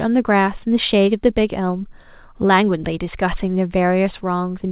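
There are no technical faults to describe in time order; the speech carries through the call path's G.711 codec at 64 kbps with nothing above 4 kHz, as that codec gives.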